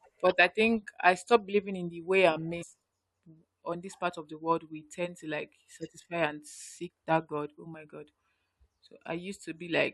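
At 2.61 to 2.63 s there's a short burst of damaged data in a compressed stream in this speech: some of the encoded bytes are wrong, so the decoder misreads that stretch, drops sync and hunts for the next good frame, leaving a quick glitch.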